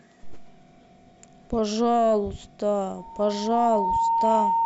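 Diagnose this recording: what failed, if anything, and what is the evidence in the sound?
Loudspeaker feedback squeal, in the acoustic and analogue path. From 2.97 s a steady 913 Hz tone swells over roughly a second, then holds about 5 dB above the speech to the end. The microphone is picking up its own loudspeaker, and loop gain at that frequency exceeds one.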